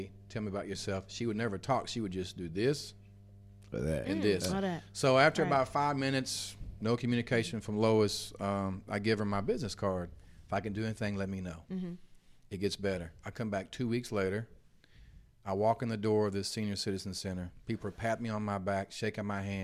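Speech sits over a steady low drone from 0.0 to 10.04 s, mains hum at 50 Hz roughly 20 dB below the speech, from power coupling in through a ground loop or nearby transformer.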